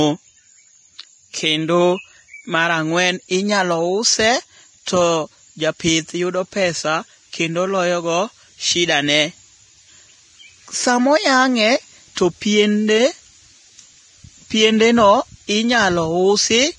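From start to end the speech carries heavy codec damage, likely Vorbis compression at a rate around 30 kbps: nothing sounds above 10.6 kHz, and the remaining treble turns to grainy hiss rather than ringing or warble, roughening tones and blurring consonant attacks.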